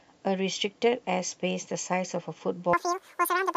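Wrong sample rate from 2.73 s to the end at 3.57 s: the speech suddenly runs at double speed and jumps a full octave, 12 semitones, higher. Because speed and pitch shift together by exactly a factor of two, with no attempt to keep the pitch steady, the samples are being read out twice as fast as they were captured. This fits 24 kHz audio played at 48 kHz without conversion, and the voice sounds squeaky and rushed.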